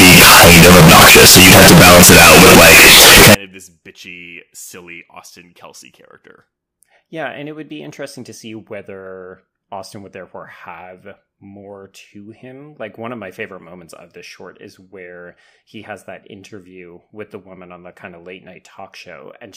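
From 0 to 3.35 s, before "of this bitchy silly", speech turns into very loud, harsh distortion, likely from signed and unsigned mixed up. The waveform jumps across its range at each zero crossing, and the spectrogram smears broadband.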